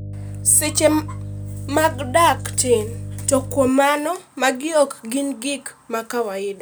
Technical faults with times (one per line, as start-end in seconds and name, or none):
0.00-3.69 mains hum